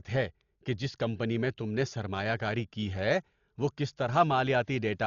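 Throughout, the speech sounds dull and rough, fluttering around tones, from heavy, likely Dolby Digital compression at about 40 kbps. The spectrogram shows a hard ceiling at 7 kHz and speckled noise.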